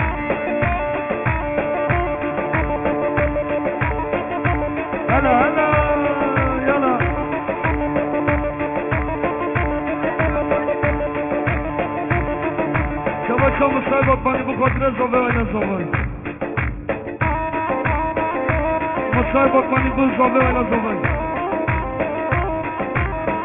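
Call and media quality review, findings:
Aliasing, whole clip: gritty, metallic tones with nothing above 3 kHz, consistent with a resampling stage dropping to 6 kHz sampling without an anti-alias filter. Fold-back sits roughly 15 dB under the signal; unlike plain band-limiting, lost highs return as wrong, unrelated pitches.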